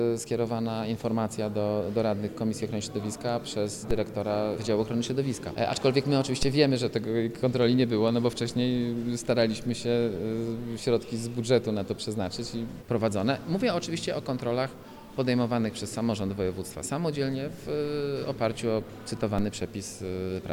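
The sound carries three DC steps, at 3.91 s, 6.43 s and 19.39 s, each heard as a low thump under the unchanged audio. The zero line jumps by about -19 dBFS at the first two and about -21 dBFS at the last, then eases back as a 5 Hz high-pass bleeds the offset away. On a waveform the trace lifts off centre and sags home; a spectrogram shows a brief low-frequency smear at each time.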